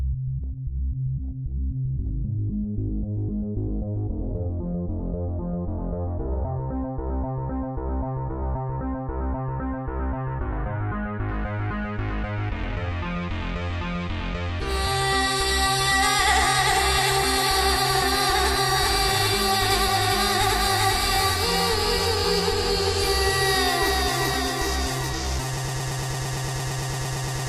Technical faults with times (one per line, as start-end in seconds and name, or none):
25.57-27.48 broken-record loop